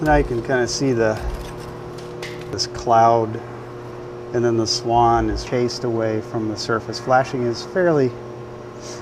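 No technical faults are audible.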